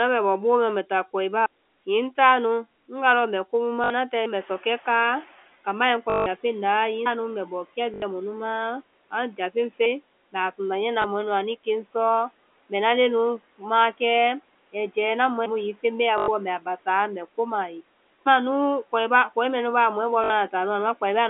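A telephone-band speech recording with three kinds of fault. Packet loss with the last packet repeated causes short robotic, buzzy stutters at 3.84, 6.1, 7.94, 16.18 and 20.24 s, and a small blip at 11.02 s (just after "a sunda niyɛ na"). They last 20 to 160 ms, which fits 20 ms packets. At 4.26 s there is a sudden skip of roughly a fifth of a second, with the two sides joined. That is likely audio missing between chunks, with 3 s processing chunks. Room noise rises by about 18 dB near 4.5 s. Through this rise, the noise suppressor catching up lets the noise through with less reduction at first. It then sinks by about 9 dB over one second, from 4.4 to 5.4 s.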